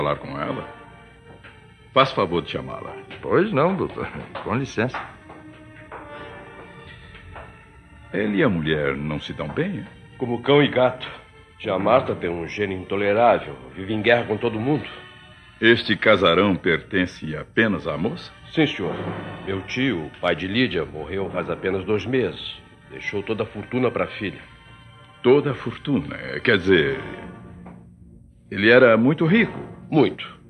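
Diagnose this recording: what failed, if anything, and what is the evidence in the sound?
The codec side failed: you get compressed frames skipped twice, at 21.34 to 21.38 s and again at 30.12 to 30.16 s. Each time the audio lurches forward by what sounds like a single frame, roughly 50 ms. A 46.4 ms frame fits that jump. The decoder dropped a damaged or missing frame, and the audio jumps ahead by that frame's length.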